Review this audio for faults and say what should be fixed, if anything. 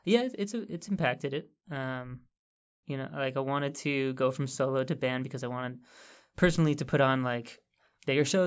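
No faults were found in this audio, so nothing needs to be fixed.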